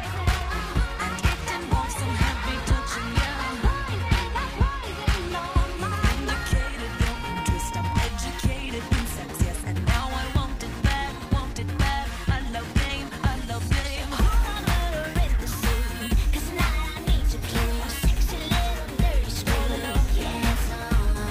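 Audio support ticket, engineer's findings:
Adaptive stream at a lower bitrate, 1.82 to 5.82 s. Abrupt, gapless switch to dull, synthetic treble with rising codec artefacts, which fits a 96 kbit/s AAC to 24 kbit/s HE-AAC downshift. Spectrogram: hard ceiling at 14.9 kHz, patchy replicated highs. Cause: player/network adaptation.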